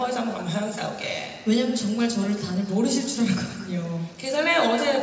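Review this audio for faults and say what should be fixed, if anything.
Nothing needs fixing: the signal carries no faults, and its content stops at 8 kHz, which fits a wideband call codec such as G.722 at around 64 kbps working as intended on this call path.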